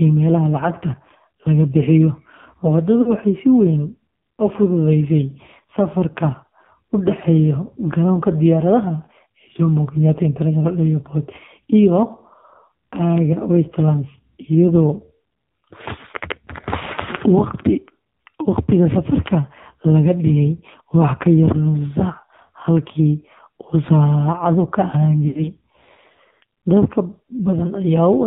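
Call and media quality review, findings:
AMR narrowband mobile codec, whole clip. Speech band-limited, nothing above 4 kHz. Buzzy, synthetic timbre and heavy codec damage, consistent with a low AMR-NB mode near 5.9 kbps. Pulse-excited vocal tract model starved of bits. Unlike a plain 4 kHz low-pass or telephone band filter, which would leave the voice smooth, the damage here is in the texture itself: a buzzy, artificial edge in the voice, not just lost brightness.

Lost AMR speech frames, 3.02 to 3.11 s, about 40 ms, fits two 20 ms frames. Brief dip or warble: the decoder repeated the last good pitch and filter settings at falling gain, then recovered slightly rough. A hard dropout would give a silent gap with clicks at its edges, while this one carries on the last voice sound.

Lost AMR speech frames, 25.28 to 25.41 s, about 80 ms, fits four frames. Longer run. The sound is smeared and stretched, then fades toward silence as the concealment gain decays, and it comes back weak. 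A jitter-buffer stretch would not fade out like this.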